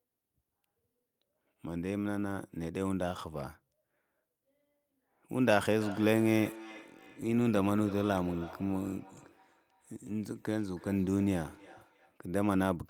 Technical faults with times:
5.80-12.19 feedback echo between two devices

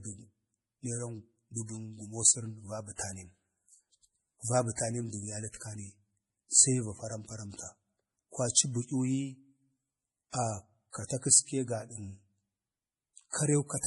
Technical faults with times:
0.00-13.87 MP3 compression
10.30-10.34 pre-echo
13.30-13.33 pre-echo

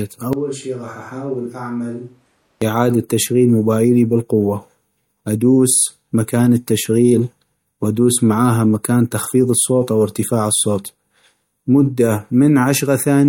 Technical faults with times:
0.33-2.62 switch to a distant microphone

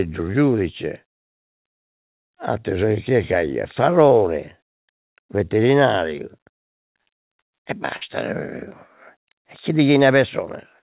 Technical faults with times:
4.09-4.12 short concealed packet loss
7.96-8.03 burst of packet loss

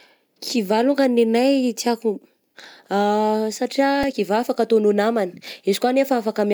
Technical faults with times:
4.03 repeated buffer

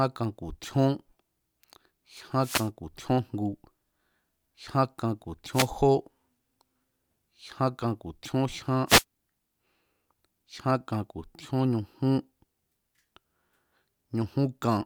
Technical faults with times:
2.40-2.70 wireless microphone noise hit
5.52-5.68 wireless microphone noise hit
8.87-9.04 wireless microphone noise hit

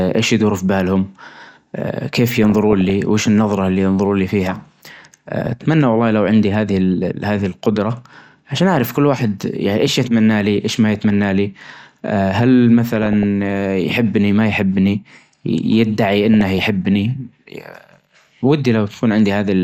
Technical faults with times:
0.00-19.64 MP2 compression
2.44-2.90 DAB burbling
5.46-5.53 DAB burbling
10.95-11.10 DAB burbling
12.87-13.23 DAB burbling
16.34-16.64 DAB burbling

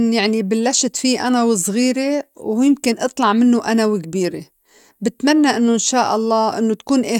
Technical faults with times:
none

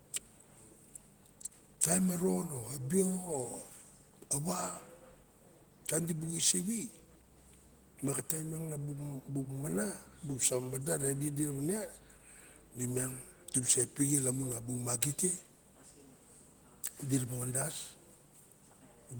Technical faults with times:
none

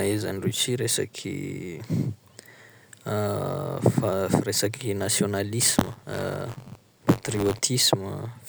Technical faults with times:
5.60-7.59 buffer tearing

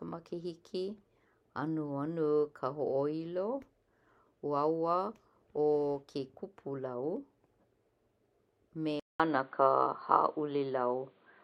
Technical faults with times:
9.00-11.43 input switched to a poorer device

